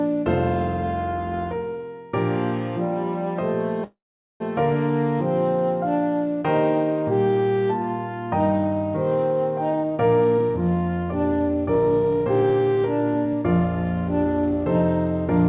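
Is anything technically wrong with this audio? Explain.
Yes, there are two faults.

From 3.84 to 4.42 s there is a call audio freeze. The likely cause is packets held up in transit, so the jitter buffer ran dry and the receiver had to invent sound. It stretched the last sound briefly, and about 440 ms of that fill is silence. When the delayed packets arrived, playback resumed where it had stopped, so nothing is lost but a 561 ms gap now sits in the audio, pushing everything after it later.

From 9.67 to 13.61 s there is a jitter buffer speed-up. The buffer was holding more audio than its target, so the receiver trimmed it back by cutting out short pitch-period-sized slices again and again, about half a second in all. Playback runs at roughly 113% speed with the pitch unchanged, so this stretch sounds hurried. Throughout, the G.711 call path leaves nothing above 4 kHz, which gives the whole clip its narrowband telephone character.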